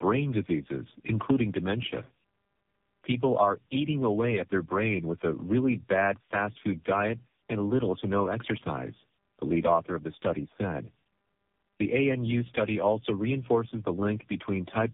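Throughout the speech, tandem speech coding stacks three low-rate coders, consistent with G.729A, GSM full rate and AMR-NB, each re-encoding the previous one's output. Unlike a single narrowband codec, the roughness, muffling and warble compound, with nothing above 3.6 kHz.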